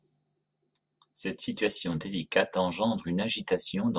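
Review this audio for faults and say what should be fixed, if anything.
No faults; nothing needs fixing.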